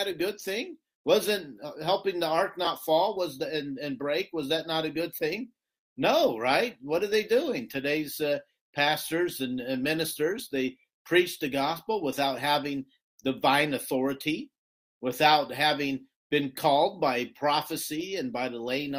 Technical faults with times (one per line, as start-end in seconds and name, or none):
none